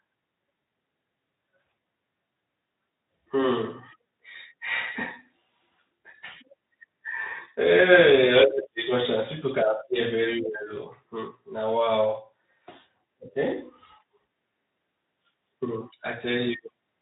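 No technical faults occur anywhere in this speech clip. It has passed through a Speex codec at 15 kbps with only light coding damage, and nothing is heard above about 3.8 kHz.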